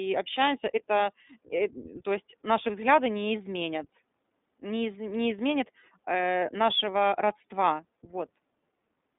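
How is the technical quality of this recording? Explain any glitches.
The recording is narrowband speech with audible coding damage from start to finish. The fault is the iLBC codec. Nothing above about 3.8 kHz survives, and the telephone band of roughly 200 Hz to 3.7 kHz gives a thin, boxy tone. Each short frame, consistent with 20 ms at the 15.2 kbps mode, is coded on its own, so the speech sounds grainy and slightly synthetic. That roughness is what separates it from simple low-pass filtering, which would only dull the sound.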